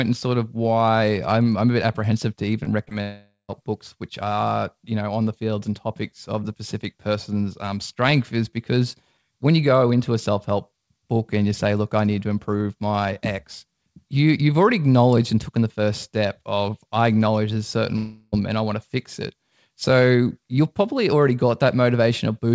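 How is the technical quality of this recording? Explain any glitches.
The recording is speech carried over a call link, with a cluster of brief packet-loss glitches near the start and two longer gaps later. The band stops at 8 kHz, which fits a wideband call codec such as G.722 at 64 kbps.

Short concealed packet loss, 2.64–2.68 s, 2.84–2.95 s and 2.89–2.93 s: about 20 ms of audio arrived too late each time, so the receiver extended the preceding sound for roughly 20–25 ms before blending back. Each gap is heard as a quick smear or wobble.

Long network dropout, 3.02–3.50 s and 17.96–18.34 s: nearly half a second, then about 0.36 s, most likely went missing in transit. The receiver stretched the last sound into a fading buzz, and the first gap settles into about 130 ms of silence before the audio resumes with the lost part gone.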